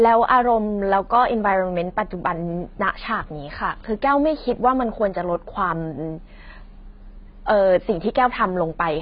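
A speech recording that has most likely passed through heavy AAC compression, with a bitrate low enough to fit something around 16 kbps. Starved of bits, the encoder lowered its cut-off, so nothing survives above 5.5 kHz, and it coarsely quantised what remains. From start to finish the speech sounds dull and smeared, with a warbling, fizzy texture where sustained sounds and sibilants should be clean.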